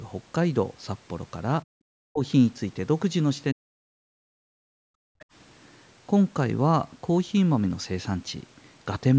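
At 1.7 to 1.75 s, 2.07 to 2.23 s and 3.53 to 4.85 s, the echo canceller likely mistook the talker for loudspeaker echo during double talk and turned both down. This is speech suppressed in double talk: the voice dips by up to about 40 dB and breaks up. From 5.13 to 5.26 s the canceller pulled the microphone down hard while the loudspeaker played. The background is gated by the echo canceller, dropping by about 33 dB before it returns. Inside that window, from 5.19 to 5.25 s, the canceller likely left some echo in place, so the other side's voice leaks through as a brief scrap about 30 dB below the talker.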